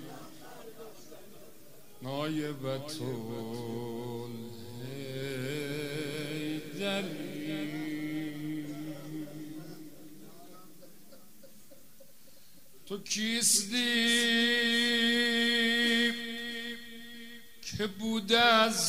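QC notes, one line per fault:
No faults heard anywhere in the clip.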